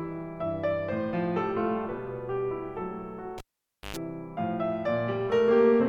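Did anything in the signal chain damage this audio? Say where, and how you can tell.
Yes. In the analogue wiring, the music is hit by a cable pulled and plugged in between 3.38 and 3.97 s. A pop marks the pull, then about 0.54 s of near silence while the live lead is out. As the plug goes back in, only the tip touches at first, picking up 0.11 s of 50 Hz mains buzz before a second pop restores the sound. On a waveform, look for a spike, a flat gap, then another spike. A spectrogram shows a blank band crossed by 50 Hz harmonic lines.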